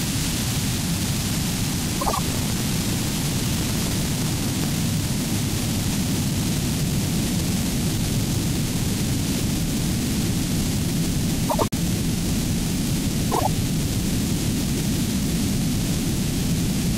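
From 1.79 to 4.72 s the audio carries buffer tearing. The writer and reader of the playback ring buffer have drifted until they cross inside every period, so roughly two fifths of each buffer replays sound from around 150 ms earlier, butted against fresh audio with hard joins. The result is a steady robotic rattle at 23.4 Hz, which fits a 2048-sample buffer, heard only while sound is present. On a waveform the joins show as regularly spaced discontinuities, and a spectrogram shows evenly spaced vertical lines at that rate.

Inside that stretch, from 2.00 to 2.19 s, come the first frames out of order. Two adjacent runs of 72 ms each, which fits three frames apiece, were decoded in swapped order, so the halves of that short span play exchanged. It is heard as a brief garbled flutter. On a spectrogram the content visibly jumps and jumps back.

The same swap recurs from 11.49 to 11.74 s with 96 ms blocks, consistent with four frames each, and again from 13.32 to 13.47 s with 48 ms blocks, consistent with two frames each. 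Each sounds like a short stutter. No time goes missing, since the stretch keeps its length and only its order is scrambled.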